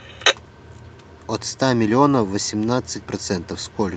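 Nothing stood out on listening to the speech as it came through the call path.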